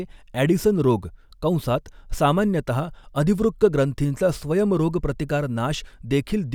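A short recording of speech, and no technical fault can be heard anywhere in it. Nothing in the audio calls for correction or a note on its cause.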